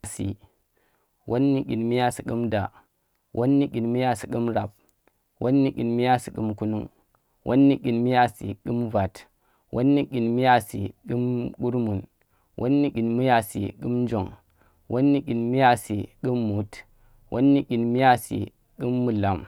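No technical faults can be heard anywhere in this speech recording. There is no moment in it to mark and nothing to trace to a cause.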